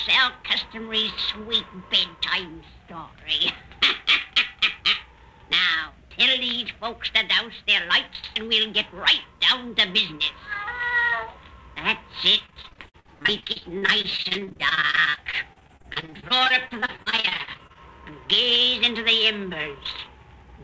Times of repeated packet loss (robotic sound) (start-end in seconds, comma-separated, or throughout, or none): 12.46-17.77